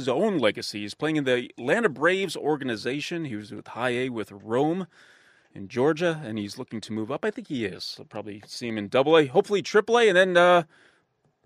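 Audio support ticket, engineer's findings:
Three sharp single clicks in the speech, at 2.24 s, 6.50 s and 8.70 s; likely dropped samples, a fraction of a millisecond missing so the waveform jumps.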